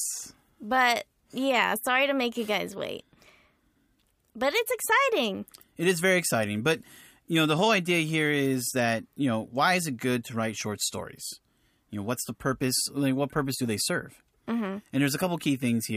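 No technical faults are audible.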